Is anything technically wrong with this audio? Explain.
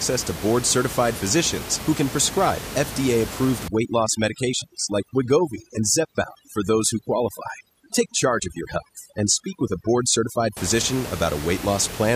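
Yes. From 3.68 s to 10.57 s the background drops and breaks up into twinkling specks. This is overdone noise removal. A noise reduction stage was set far too aggressively against the room noise, which sits about 11 dB below the speech. It pulls individual frequency bands down or out whenever they come close to its noise estimate, so quieter parts of the speech are stripped away along with the background.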